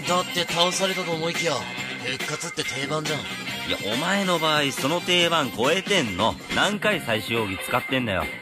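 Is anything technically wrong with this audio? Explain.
Yes. From 6.72 s to the end, channel delay (comb filtering) appears: one channel lags by only a few samples, well under a tenth of a millisecond, and the mono sum cancels evenly spaced frequencies from around 7 kHz upward. The top sounds thin and phasey. Unlike flanging, the notches stay fixed rather than sweeping.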